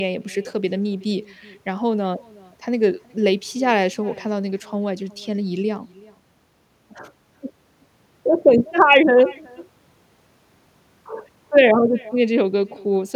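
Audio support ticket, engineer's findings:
Echo with no canceller, throughout. Speech shadowed by a quieter, thinner copy roughly 0.4 s later, about 25 dB down. Far-end loudspeaker into far-end mic, not removed. On the spectrogram, a faint delayed duplicate of each syllable. On the waveform, low tails after each burst.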